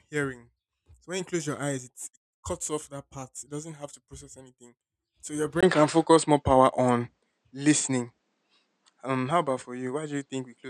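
At 5.61 s, after "process anything so your", a 20 ms gap precedes duller audio with a level shift of about 5 dB and no content above 9 kHz, likely an input switched to a poorer device.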